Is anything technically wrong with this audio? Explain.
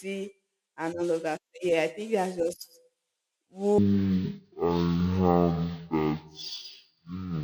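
Yes. Stereo read as mono, from 3.78 s to 7.44 s, just before "that no": interleaved left and right samples are read consecutively as one channel, so the speech plays at half speed and a full octave lower, with a fainter mirrored copy in the upper spectrum.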